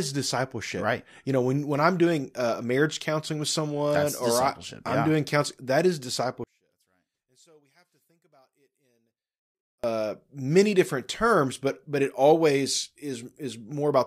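From 6.44 to 9.84 s, between "doing counseling that is" and "many different terms but", the speech nearly vanishes, falling about 38 dB. The likely cause is one channel inverted, cancelling the centred signal in mono. The waveform shrinks to a sliver, and the spectrogram fades almost blank.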